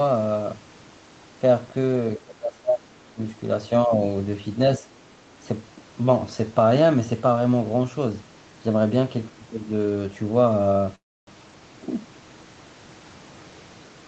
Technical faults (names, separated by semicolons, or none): speech suppressed in double talk; other side's voice leaking through; call audio freeze